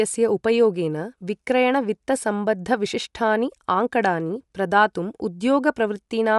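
Throughout, audible Bluetooth LC3 compression, likely from a roughly 48 kbps link, leaves the speech breathy and grainy; spectrograms show nothing above 11.5 kHz.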